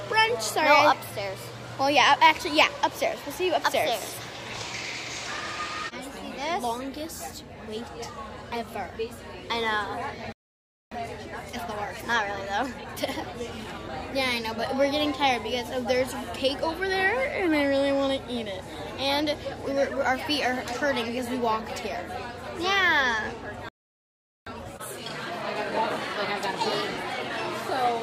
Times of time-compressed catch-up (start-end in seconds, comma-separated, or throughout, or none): 10.91-13.91, 24.46-27.46